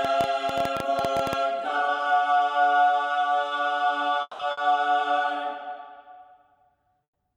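From 0.05 to 1.34 s a train of clicks, around fifteen irregular pops near 11 per second and about 10 dB above the sound, likely from interference, shows as thin vertical spikes across the spectrogram. At 4.21 to 4.42 s a long network dropout, likely from a stalled connection, loses 180 ms: the last sound is carried on and fades to fill it, then 30 ms of flat waveform. Bursts of packet loss follow at 4.51 to 4.60 s, 60 ms covered by the last sound carried on and fading, and at 7.03 to 7.18 s, 120 ms lost and mostly left as a blank band.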